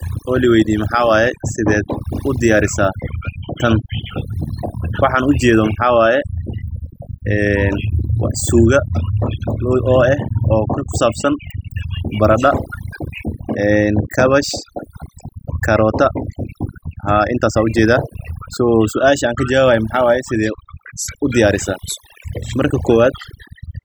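Throughout the speech, the background drops and breaks up into twinkling, chirpy specks. This is overdone noise removal: a noise reducer set too aggressively pulls individual frequency bands down whenever they resemble its noise estimate, taking the quieter parts of the voice with them.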